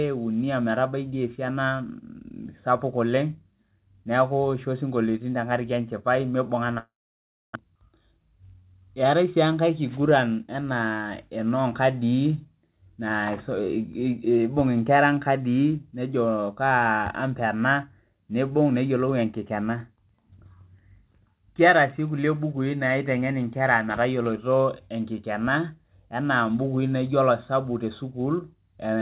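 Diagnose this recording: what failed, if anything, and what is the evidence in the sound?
The failure is at the network stage, most likely a long network dropout. From 6.78 s to 7.57 s the speech stops arriving. The receiver first extends the last sound as a fading buzz, then leaves about 0.63 s of silence. When speech resumes, roughly 0.6 s of content is missing. A deliberate mute or an edit would cut in abruptly, with no synthetic tail fading into the gap.

Right after that, from 7.66 s to 9.45 s, a jitter buffer speed-up is audible at the buffer stage. The backlog that built up during the outage is drained by removing short pitch-period slices, which plays the speech about 7% fast and trims roughly 150 ms of delay. The result sounds hurried while the pitch stays put. A clock or sample-rate error would raise the pitch along with the tempo. Throughout, the telephone-band G.711 path carries nothing above 4 kHz.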